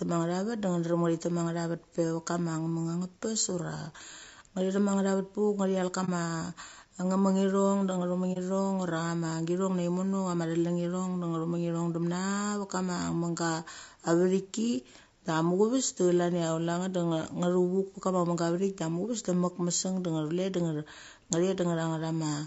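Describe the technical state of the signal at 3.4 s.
At 3.4 s, as throughout, the speech sounds rough and grainy, likely from low-delay AAC compression whose short frames smear harmonics at what sounds like 32 kbps.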